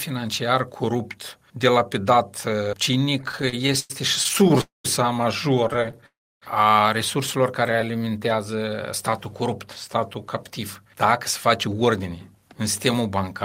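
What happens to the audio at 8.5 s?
At 8.5 s the audio is inside a jitter buffer slow-down that runs from about 7.76 s to 9.30 s. The receiver's buffer had run short or had just raised its target delay, so it padded its reserve by repeating individual pitch periods and fragments of quiet, adding about 126 ms in total. Playback drops to roughly 92% speed without any change in pitch, so the sound through this stretch feels dragged out and slightly elongated.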